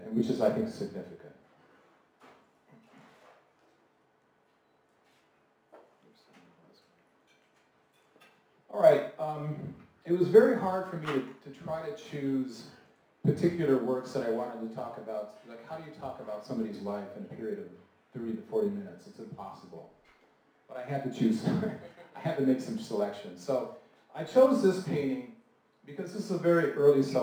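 Crude rate conversion runs through the whole clip. Samples were dropped by picking the nearest one, with no filter. This fits a 48 kHz to 44.1 kHz change. The patterned error sits about 35 dB below the signal, adding a gritty, inharmonic fizz that follows loud and high sounds.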